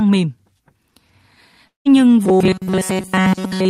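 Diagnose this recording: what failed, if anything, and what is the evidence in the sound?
Network stage: a long network dropout, most likely a run of lost packets, opens a gap from 1.67 to 1.87 s. The last sound is stretched into a fading buzz, and about 150 ms of near-silence follows before the speech resumes with roughly 180 ms of it simply gone. On a waveform the envelope tapers into a flat line; on a spectrogram the harmonics smear into a decaying horizontal band, then go blank.

Buffer delivery: from 2.25 s to the end, the speech turns into robotic sound from repeated short buffers, likely because new audio arrives too seldom and the player loops the last fragment instead. All of this stretch is repeats, imposing a rigid 188 Hz buzz, which fits a segment of about 5.3 ms. A spectrogram shows evenly spaced harmonics of 188 Hz, and the waveform shows a near-identical short cycle repeating.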